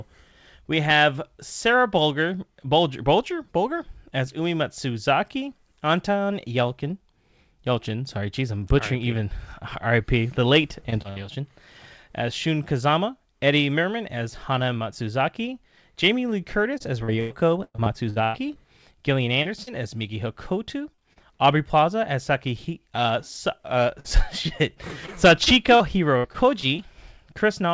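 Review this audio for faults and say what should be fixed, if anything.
Repeated packet loss (robotic sound) occurs at 10.80–11.18 s, 16.78–18.57 s and 23.997–26.80 s. Gaps of up to about 0.1 s, repeatedly patched by extending the preceding sound, make the speech choppy and mechanical.

Short concealed packet loss occurs at 19.43–19.47 s, 19.63–19.69 s, 20.95–21.00 s and 21.13–21.18 s. Each 20–40 ms hole was filled from the preceding sound, leaving a brief smear or wobble.

The call path's band limit, with nothing above 8 kHz, is consistent with G.722. To prevent the losses, stabilise the network link by reducing congestion, prioritising voice traffic or adding forward error correction so fewer packets are lost or arrive late.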